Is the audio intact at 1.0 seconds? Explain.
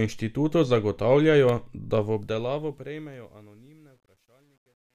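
Yes, the speech at 1.0 seconds is intact, with no fault at that moment.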